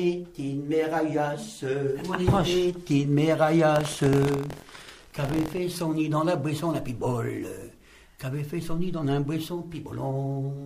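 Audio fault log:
3.74–5.59 s: buffer tearing. A steady robotic buzz at about 43 Hz, which fits a 1024-sample buffer, as writer and reader cross each period and splice in a small slice of audio from about a tenth of a second earlier. Unlike dropouts, nothing goes silent, and it is heard only while sound is present.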